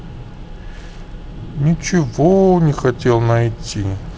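No technical faults can be heard anywhere in this speech recording. It has come through G.722 wideband telephone coding, with the band limit near 7 kHz, a light hiss in the upper band and a slightly noisier lower band, which fits the 48 kbit/s mode.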